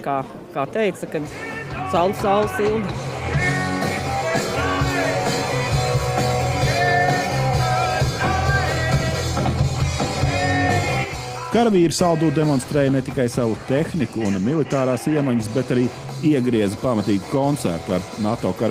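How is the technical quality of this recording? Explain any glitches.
There is one glitch, a brief jitter buffer speed-up from 11.05 to 11.52 s. Packets had piled up in the receiver's buffer, so to shrink the extra delay it cut out short slices, each one or a few pitch periods long, again and again, removing about 50 ms in total. For that half-second the sound plays roughly 9% fast while keeping its pitch, so it comes across as a rushed, hurried stretch rather than a jump or gap.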